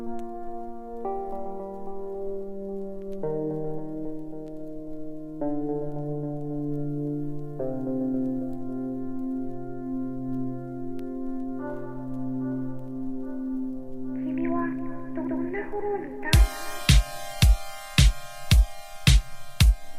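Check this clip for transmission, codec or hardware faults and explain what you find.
Nothing in the clip points to a fault of any kind. There is no event to place in time or explain.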